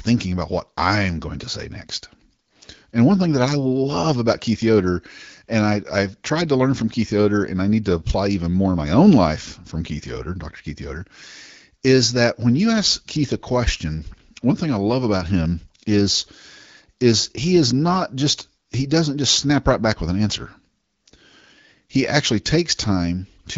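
No technical faults can be heard in this recording.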